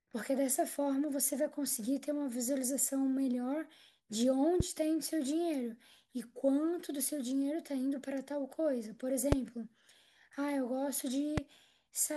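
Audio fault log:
4.60–4.63 s, 9.32–9.35 s, 11.38–11.40 s: loud pop. Three single sharp pops, each about 20 ms, sitting well above the speech, roughly 15 to 20 dB hotter (the middle one loudest), while the talking carries on underneath. Likely a voltage spike from a plug, switch or static.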